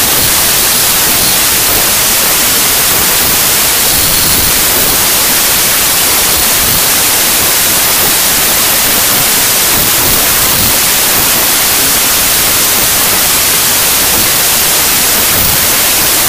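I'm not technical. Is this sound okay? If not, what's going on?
No. From start to finish this is a wrong sample width fault: the audio was stored with three bytes per sample but read back as two. It sounds like loud hiss with the real sound buried underneath, playing at two-thirds speed and lower pitch.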